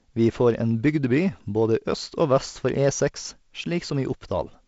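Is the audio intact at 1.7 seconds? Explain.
Yes, the audio at 1.7 s is intact, with no fault at that moment beyond the light, even coloring of G.722 wideband telephone coding at a low bitrate, which leaves the speech band-limited at about 7.7 kHz.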